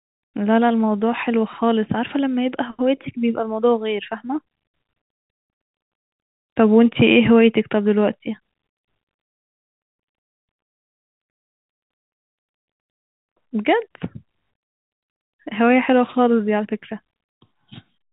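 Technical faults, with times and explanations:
Nothing stood out as a technical fault on listening to this speech.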